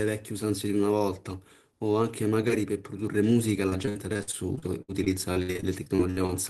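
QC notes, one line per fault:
3.69–6.31 s, repeated packet loss (robotic sound): about twenty separate dropouts hit the speech in quick succession. Each gap, the longest about 66 ms, is bridged by stretching the preceding sound, so roughly a quarter of this span is synthetic fill. The repeated patching gives a choppy texture with fragments missing, heard through an Opus call path whose audio stops at about 12 kHz.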